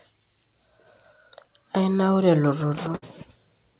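At 2.96 s a burst of packet loss breaks into the speech. Consecutive packets failed to arrive in time, so the receiver extended the last sound for about 60 ms, letting it fade, then jumped ahead at 3.04 s with roughly 60 ms of speech never heard. It sounds like a brief held buzz or hiss dying away, then an abrupt resumption. A spectrogram shows smeared, repeating bands fading into a hard cut, and the waveform shows a decaying, repetitive envelope. The surrounding call audio has nothing above 4 kHz, which fits a G.711 A-law path.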